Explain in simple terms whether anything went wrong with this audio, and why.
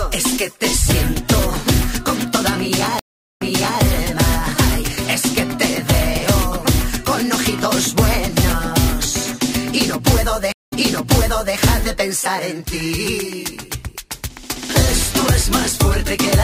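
Two stream reconnects break the playback. The connection dropped, the player went quiet, then reconnected and started decoding again partway through. At 2.99 s there's about 0.4 s of silence before the sound returns at 3.81 s, but it jumps back roughly 0.42 s, so you hear a bit repeated. At 10.52 s the gap is shorter, about 0.18 s, and by 11.57 s the sound has jumped back about 0.86 s, replaying nearly a second of audio.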